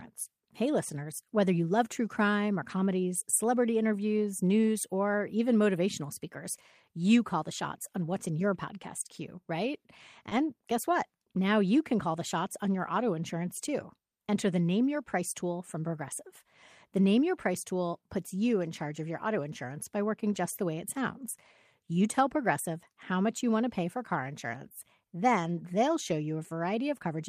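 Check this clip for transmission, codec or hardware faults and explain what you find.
Two transmission faults overlap at one moment of this speech, just after "your podcast queue right" and before "guess what".

Short concealed packet loss at 10.29 to 10.33 s: about 20 ms arrived too late, so the receiver extended the preceding sound. It is heard as a brief smear.

Lost packet rebuilt from error correction at 10.31 to 10.33 s: one 20 ms packet was replaced by a low-bitrate copy from the following packet. It sounds rougher and noisier.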